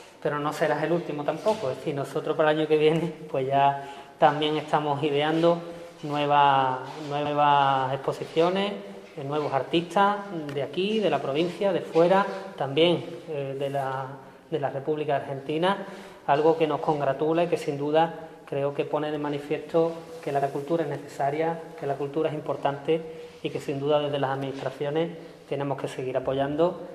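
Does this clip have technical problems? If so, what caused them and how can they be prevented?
Yes. Repeated frames occur at 7.25 s and 20.41 s. A 93 ms block, then a 70 ms block, plays twice because compressed frames were written or sent again. Each repeat is heard as a stutter, and a spectrogram shows identical patterns side by side. Checking the encoding and transmission chain for duplicate writes or resends prevents it.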